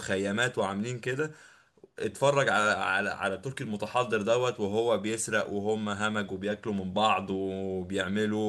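Speech recording with nothing technically wrong with it.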